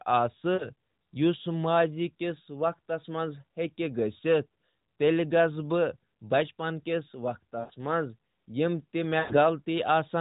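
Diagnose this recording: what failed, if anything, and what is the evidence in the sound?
Lost AMR speech frames at 0.54–0.69 s (about 60 ms) and at 7.60–7.72 s and 9.20–9.39 s (about 100 ms each). Radio errors caused the frames to be rejected. The AMR-NB decoder then replayed its last pitch and vocal-tract settings with falling gain. The sound drags and fades instead of cutting to a hard gap, as a buffer dropout would.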